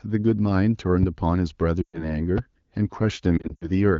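At 1.03 to 1.05 s a loud pop, about 10 dB above the speech, cuts in sharply while the speech carries on beneath it. This is likely a voltage pulse from a switch, plug or static discharge. A similar pop follows at 2.38 to 2.40 s.

From 1.82 to 2.16 s lost AMR speech frames leave a 120 ms gap, which fits six 20 ms frames. The decoder repeats its last good settings at falling gain, so the sound smears briefly and fades fast, as wideband concealment does, then returns weak. From 3.37 to 3.71 s the same fault recurs as scattered losses, runs no longer than 60 ms, heard as short dips and warbles against the otherwise clear HD Voice band.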